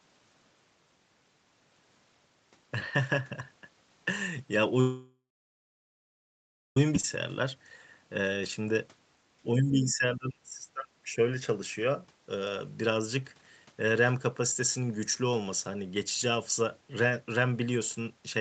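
A call audio freeze runs from 4.80 to 6.77 s, most likely because packets stalled in transit and the jitter buffer emptied. The receiver carries the last sound forward as a brief fading buzz, then about 1.56 s of near-silence, for roughly 1.96 s of inserted wait. Nothing is lost here: when packets resume, the audio picks up exactly where it stopped, so this stretch pushes everything after it later in time.

A skip ahead follows at 6.96 s. Having fallen around two seconds behind, playback drops a backlog of queued audio to catch up, and the jump is almost seamless. The result is that roughly two seconds of speech vanish outright. The material on either side of the cut butts directly together, so the missing content leaves no marker beyond an abrupt change in what is being said.

A short stall from a late packet sits at 7.00 to 7.04 s. One packet misses its playout deadline, the buffer runs dry, and the receiver stretches the preceding sound by about 29 ms until the packet lands, then resumes from the same point. 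Nothing is dropped, but the sound in progress hangs on slightly too long, with a faint buzzy or dipped quality.

Speech suppressed in double talk occurs from 9.58 to 11.18 s, likely because the echo canceller, faced with both parties talking at once, could not separate the near talker from loudspeaker echo and attenuated everything. The speech dips unevenly, falling by about 25 dB at its deepest, with roughly 1.5 s affected in total. The audio is band-limited to 8 kHz throughout, as expected for this call path.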